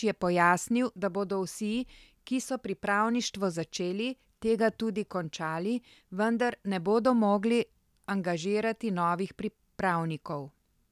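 No technical faults are audible anywhere in the speech recording.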